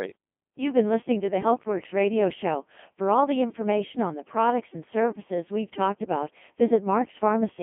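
Robotic, buzzy speech confined to roughly 200 Hz to 3.5 kHz throughout: the Codec 2 vocoder rebuilds the voice from sine waves, heavily damaged, pointing to about 2.4 kbit/s.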